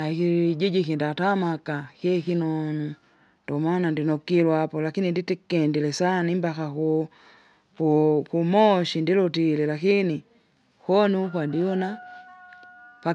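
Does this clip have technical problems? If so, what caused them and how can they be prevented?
No, there are no technical problems in this recording.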